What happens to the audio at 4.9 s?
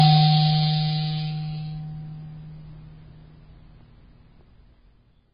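At 4.9 s the music is still under the same damage it carries for the whole clip, likely from AAC compression at a very low bitrate, one that fits about 16 kbps. To save bits, the encoder gives up the top of the spectrum and coarsely quantises what remains against its hearing model. Nothing is left above 5 kHz, so the music sounds dull and smeared, with a warbling, fizzy texture on sustained tones.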